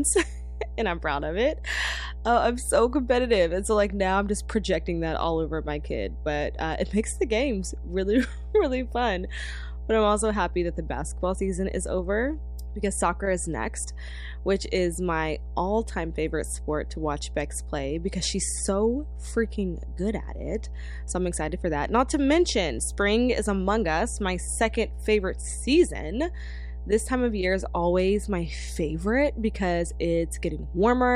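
Mains hum runs through the whole speech clip: a steady 60 Hz drone with low harmonics, fairly loud at around 10 dB below the speech, from a ground loop or nearby transformer. A spectrogram shows unbroken horizontal lines at 60 Hz and its multiples.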